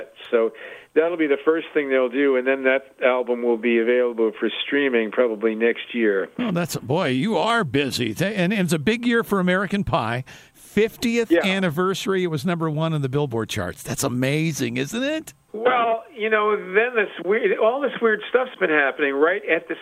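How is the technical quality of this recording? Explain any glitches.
There is one glitch: a single click. Dropped samples, at 7.50 s: a tiny fraction of a millisecond of the stream is likely missing, so the waveform jumps abruptly from one value to a later one. That step is heard as one brief, sharp click, with no sound lost around it.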